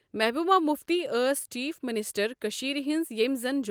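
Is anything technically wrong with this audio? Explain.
No, nothing in this speech clip points to a technical problem. No dropouts, distortion, glitches or other defects can be heard at any point.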